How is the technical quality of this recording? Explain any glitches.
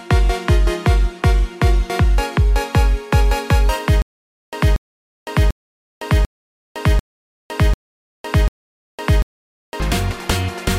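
The recording has one clear glitch, a stutter with silent gaps, from 4.02 s to 9.80 s. A short burst of about 235 ms repeats seven times. Each burst is followed by about 508 ms of dead digital silence, so it returns every 743 ms at an even pace. The likely cause is a stalled player or stream replaying its last fragment on each retry, then running empty. The audio due in that span is lost.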